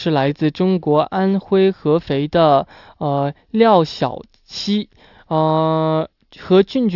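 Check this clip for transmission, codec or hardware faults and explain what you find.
Nothing turns up on a listen here; the speech holds together the whole way with nothing worth flagging.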